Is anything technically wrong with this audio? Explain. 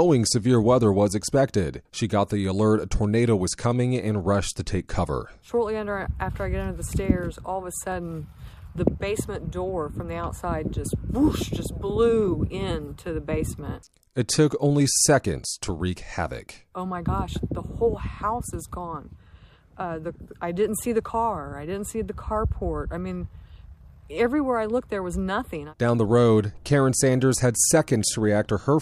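No, no technical faults detected.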